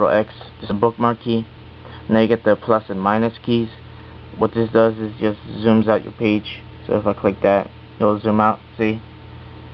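At 0.69 to 0.71 s the audio lurches forward with no gap or filler: about a second of material never plays, and the sound on either side is butted straight together. This is a skip ahead. After the audio fell behind, the receiver discarded the missing stretch rather than wait for it, so playback caught up by jumping and its delay shrank by roughly that same second.

From 0.79 to 1.65 s the audio runs noticeably hurried, at about 110% speed, yet its pitch stays where it was. This is a jitter buffer speed-up. With more audio queued than the buffer aims to hold, the receiver trimmed many short pieces, each one or a few pitch periods long, removing roughly a tenth of a second in total to bring the delay back down. Throughout, the call codec limits the sound to below 8 kHz, which fits an Opus stream at around 32 kbps.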